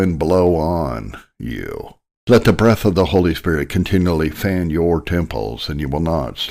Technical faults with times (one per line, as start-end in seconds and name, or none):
none